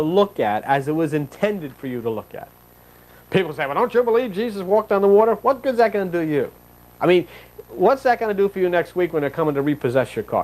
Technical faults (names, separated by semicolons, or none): none